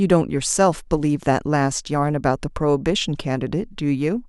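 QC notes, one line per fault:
No fault to note in this clip.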